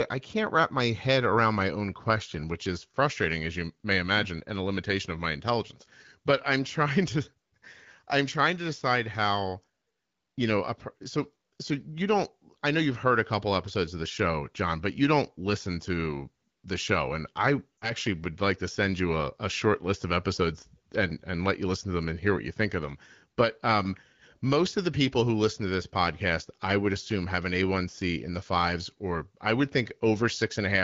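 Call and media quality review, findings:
Lost AMR speech frames, 17.78–17.93 s. Brief frozen sound decaying toward silence, then a weak, rough onset. About 40 ms lost, which fits two 20 ms frames failing checksum. The AMR-WB decoder repeats the last pitch and vocal-tract parameters with falling gain. Spectrogram: static harmonics fading out. Waveform: envelope dip.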